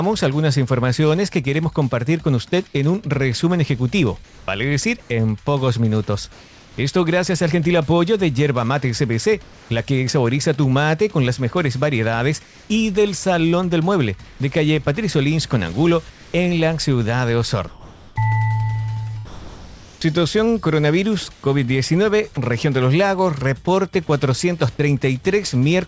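From 4.24–6.78 s, then 9.42–9.70, 12.44–12.70, 14.24–14.40 and 16.10–16.34 s, there's comfort noise in place of the background: the real background gives way to flat synthetic hiss, sometimes about 2 dB quieter, likely because the sender's voice detector stopped transmitting. Between 17.68 and 22.37 s the sound is chopped by the voice detector, likely flipping on and off repeatedly. About 1.4 s is lost to fill, so it sounds choppy.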